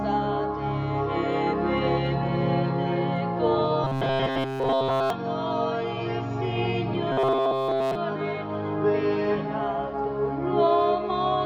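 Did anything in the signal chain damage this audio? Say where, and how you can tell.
Yes. A rigid, metallic 133 Hz buzz at 3.84–5.10 s and 7.12–7.95 s is robotic sound from repeated short buffers, likely a starved driver buffer looping 7.5 ms blocks.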